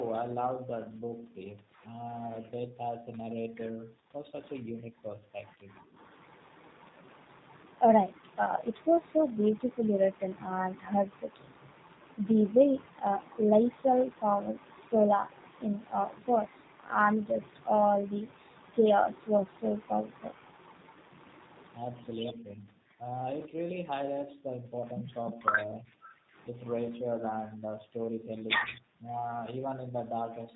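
G.729 codec damage runs through the whole of the speech, from start to finish, and it is plainly audible. Nothing above 4 kHz survives, so the speech sounds narrow and muffled. Each 10 ms frame is rebuilt from a vocal tract filter, a pitch predictor and a few pulses rather than the real waveform, which gives the speech a rough, slightly synthetic texture. The sound fits the 8 kbit/s G.729A variant.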